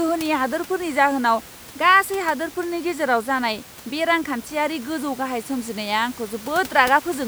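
No technical faults are audible.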